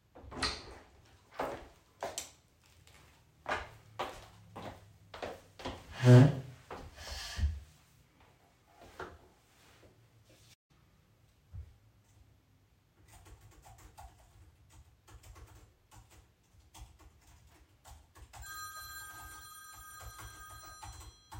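At 10.53 s the sound cuts out abruptly in mid-flow and the output stays silent for about 155 ms, picking up again at 10.71 s. The gap is short but clearly audible as a hole rather than a fade. This is a playback stall: the player most likely ran dry of buffered data, or its audio thread was held up, so nothing reached the output until it caught up and resumed.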